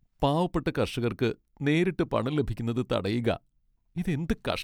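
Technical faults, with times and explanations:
No technical faults found in the speech; nothing to report.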